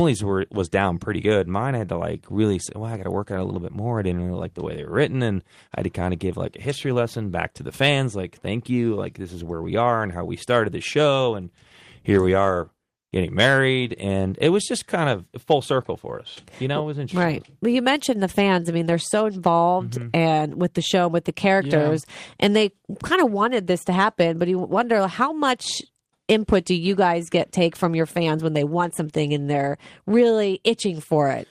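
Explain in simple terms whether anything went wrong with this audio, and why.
Nothing went wrong with it.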